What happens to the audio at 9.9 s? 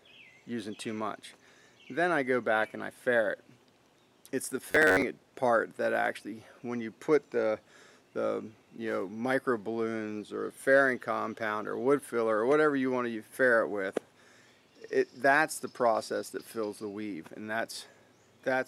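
Nothing goes wrong at 9.9 s; the audio plays through that moment cleanly, with no dropout, click or other fault.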